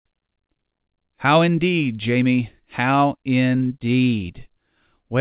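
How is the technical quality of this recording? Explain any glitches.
There are no audible glitches or faults here.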